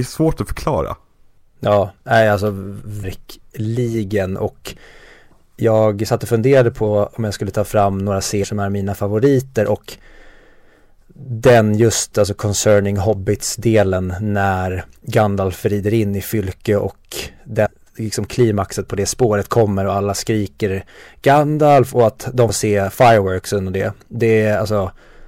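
Compressed frames skipped at 3.02 s, 8.43 s (between "skulle ta fram några" and "är mina favoriter och"), 17.65–17.67 s (before "liksom klimaxet på det") and 22.48 s (after "och att de"). At each point, whole 26.1 ms frames never play, which fits 1152-sample frames at 44.1 kHz. The speech jumps ahead by roughly 300, 150, 300 and 70 ms.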